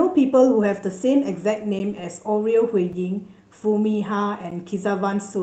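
Speech that has passed through an Opus call path, with the audio band ending near 8 kHz, carries three blocks of digital silence at 1.79 s, 2.93 s and 4.51 s, lasting 10 ms, 5 ms and 10 ms. At each one, the sound cuts out abruptly and returns without a fade, which fits an output buffer that was not filled in time. Each is short enough to be heard as a tick or dip rather than as silence. At 1.98 s there is one lost packet rebuilt from error correction. A single 20 ms frame was lost, and the decoder played the low-bitrate copy carried in the following packet. There is no gap there, but that stretch sounds briefly rougher and noisier than the audio around it.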